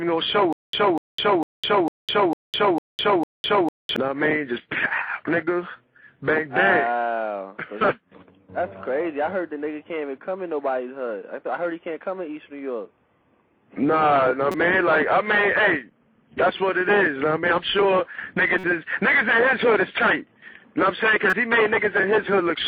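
From 0.53 to 3.96 s there is a stutter with silent gaps: a 245 ms fragment repeats seven times, each followed by about 207 ms of silence, a 451 ms cycle. This likely comes from a stalled stream replaying its last buffer and then running dry. The silence between repeats sets it apart from a seamless loop, and the audio meant for that span never plays.

Corrupt frames are decoded at 14.51 to 14.55 s, 18.55 to 18.66 s and 21.29 to 21.33 s, each spanning a couple of frames, and about four in the middle one. Damaged bits put energy at wrong frequencies, heard as an abrupt chirp, blip or noise burst lasting a frame's length, unlike a one-sample click.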